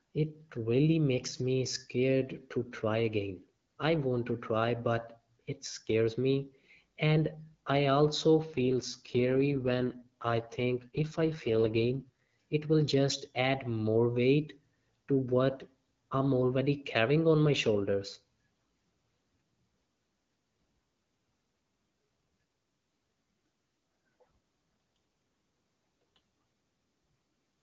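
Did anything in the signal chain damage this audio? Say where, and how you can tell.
Yes. The damage comes from the network side of a wideband mobile call. A weakening radio link forced two AMR rate drops, from 8.46 to 12.27 s, between "I also" and "it will just add", and again from 22.01 to 23.95 s. The bandwidth and continuity hold, but the speech turns rough and synthetic. That fits the codec falling from about 12.65 to 6.6 kbit/s and spending the freed bits on error protection until the rate recovers.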